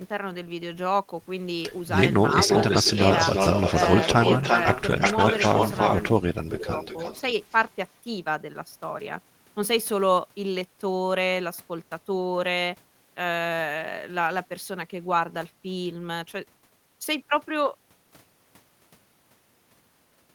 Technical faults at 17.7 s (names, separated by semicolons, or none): none